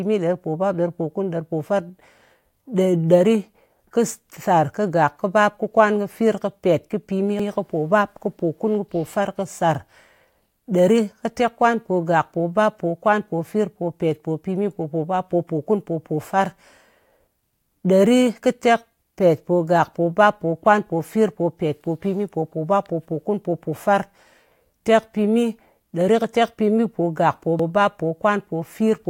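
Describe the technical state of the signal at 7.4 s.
At 7.39 to 7.50 s, right after "kɨfir kɨpèt kɨpìmi" and before "kɨpòbap kɨpòkun kɨpòfar kɨsàr", there's an overlapping-chunks fault. Roughly 10-second chunks are joined with the new one starting 100 ms early, so that slice plays twice and you hear a quick stutter.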